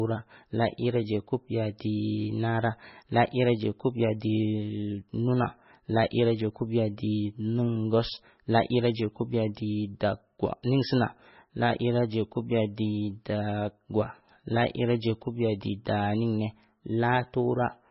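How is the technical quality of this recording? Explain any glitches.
The quality is poor, with heavy MP3 compression damage across the whole recording. The encoder likely ran at a very low bitrate, cutting everything above 5.6 kHz and dropping weak frequency lines that flicker frame to frame. The speech sounds dull, watery and swirly, with chirpy sibilants and smeared onsets.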